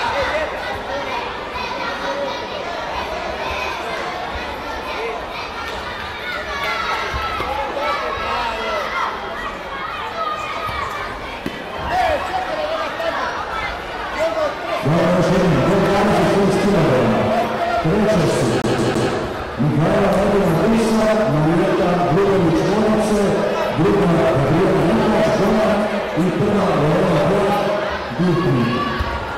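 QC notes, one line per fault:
18.62 to 19.11 s, CD stuck on one turn: a 0.16 s slice repeats three times with brief mutes, a scratch throwing the laser back a track each rotation.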